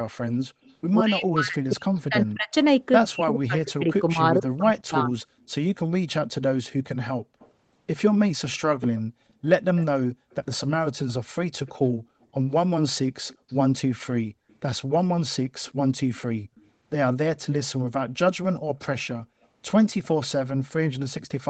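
From 0.64 to 2.31 s a faint copy of the speech trails it by 170 ms, about 35 dB down. This is an echo leak, likely from a far-end loudspeaker whose echo canceller let residue through. On a spectrogram it shows as weak, smeared duplicates of the formant patterns, shifted right.

Overlapping that, from 1.0 to 5.21 s, the speech is suppressed in double talk. The canceller, likely caught by both sides talking, pulls the level down by as much as 40 dB across roughly three seconds in total. The waveform shows abrupt notches and gaps, and the spectrogram loses its upper bands in patches.

The same echo leak returns from 7.39 to 16.62 s and from 18.53 to 20.08 s, again at 170 ms delay and slightly stronger, about 30 dB below the speech.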